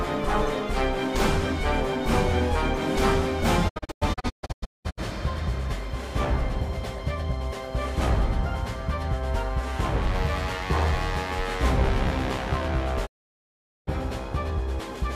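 From 3.68 to 5.00 s, a digital broadcast dropout mutes the receiver in scattered holes totalling 800 ms, the longest 192 ms; at 13.05 s a single 800 ms gap follows. Each edge fades over 20 ms, and the waveform shows flat silence with blank spectrogram columns.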